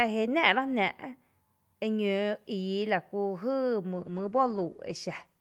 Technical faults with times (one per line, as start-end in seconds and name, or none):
3.92-5.41 call bitrate drop